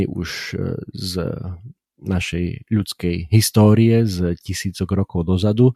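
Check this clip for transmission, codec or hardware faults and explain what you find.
Nothing in this speech recording points to a fault. There is nothing to report.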